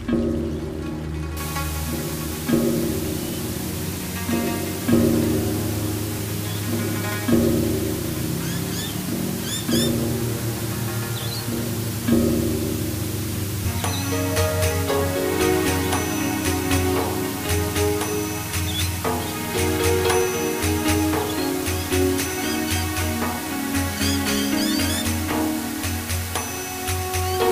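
From 1.37 s to the end, a constant, even hiss sits very close to the level of the audio, only about 10 dB beneath it, which fits requantisation to roughly 5 bits with dither. This is low bit depth with dither: random noise added before the coarse rounding turns the error into steady white noise. Unlike undithered truncation, there is no gritty distortion that follows the signal and no hiss that appears and vanishes with the level.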